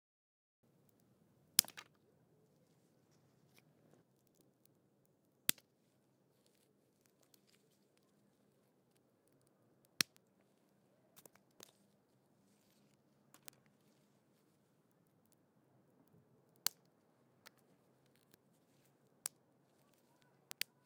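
A recording of everyday sounds with two kinds of technical fault. It has a cut-off start: the first 0.63 s are digital silence, and at 0.63 s the audio switches on in the middle of a sound, with no attack or fade-in. This points to capture or streaming beginning late, so the opening of the event was never recorded and the signal appears at full level from a dead-quiet floor. Three bit error spikes follow, at 10.17, 13.48 and 20.51 s. Each is a single sharp tick, broadband and unrelated to the surrounding sound, lasting only a sample or two. That fits a flipped bit in memory or on a digital link: one or two sample values jump by a power of two and immediately return, producing an impulse that has nothing to do with the acoustic content.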